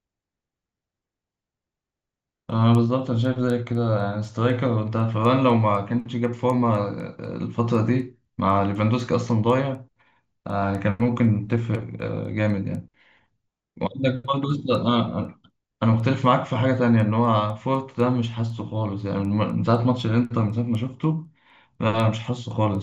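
From start to end, the speech carries a steady tick four times a second, spaced every 250 ms, the signature of a resampler restarted on every block. Each 250 ms chunk was converted from 16 kHz to 48 kHz in isolation, so its edges were computed against missing neighbours and left a small discontinuity. Unlike buffer underruns, nothing drops out and the timing stays perfectly regular, and the ticks fade whenever the speech pauses.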